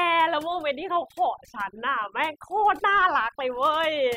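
Overdone noise removal runs throughout the speech: an overly aggressive noise reducer switches off frequency bands near its noise estimate, leaving twinkling near-silence.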